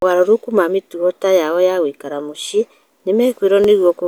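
From 0.41 s to 3.64 s, clicks recur every 0.81 s, likely clock drift buffer slips of a few dozen samples, showing as thin vertical broadband lines on a spectrogram.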